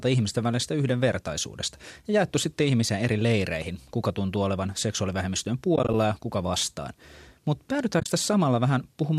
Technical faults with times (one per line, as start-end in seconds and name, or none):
5.75-5.94 AAC frame loss with muting
8.00-8.08 AAC frame loss with muting